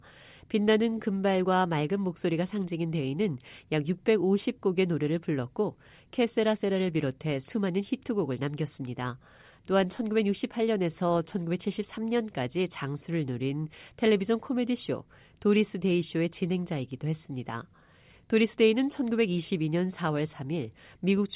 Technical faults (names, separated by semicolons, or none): none